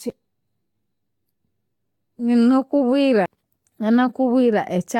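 Generation loss runs through the whole speech clip: swirly, hollow, smeared audio with blurred attacks and nothing above 18.5 kHz, likely from about three successive Vorbis encodes near 64 kbit/s, each compounding quantisation damage.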